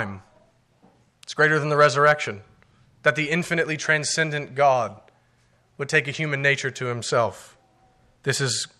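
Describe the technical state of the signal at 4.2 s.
At 4.2 s the speech signal is intact, with no audible fault at that point.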